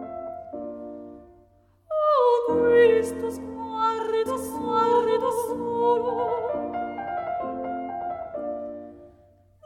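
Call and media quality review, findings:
Doubled audio track, 4.26–7.08 s: likely a second, slower capture path or an edit keeping two copies out of step. Full-band repeat trails by about one second at roughly equal level, dry, no room decay, starting and stopping abruptly.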